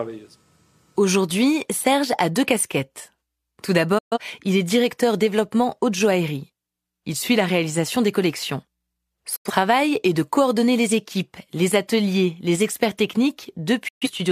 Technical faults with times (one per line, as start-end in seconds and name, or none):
3.98-4.18 digital broadcast dropout
9.36-9.51 digital broadcast dropout
13.88-14.08 digital broadcast dropout